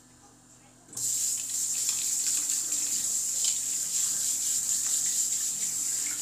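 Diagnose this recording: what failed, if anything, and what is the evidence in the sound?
Nothing failed: no stage in the chain, from wiring through converter, buffer, format conversion, processing, codec, network, storage or playback, leaves any audible trace in the sound.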